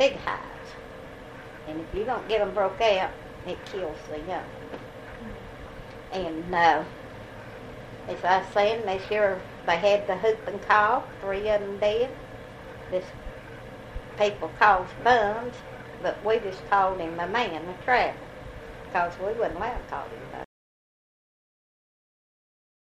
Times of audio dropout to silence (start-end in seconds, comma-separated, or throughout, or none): 20.44-22.92